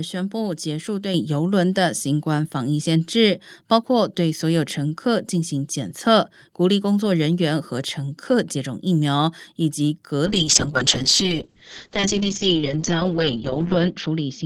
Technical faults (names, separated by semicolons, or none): microphone volume stepped up; call bitrate drop